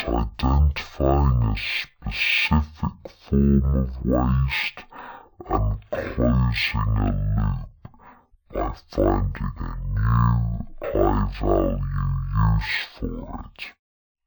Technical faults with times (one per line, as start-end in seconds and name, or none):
0.00-14.27 stereo read as mono